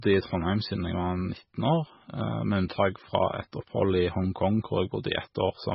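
Likely MP3 compression at a very low bitrate, consistent with about 16 kbps, affects this speech clip from start to finish: the encoder removed everything above 5.6 kHz and dropped weak frequency detail frame by frame, leaving the audio dull, watery and swirly, with smeared attacks.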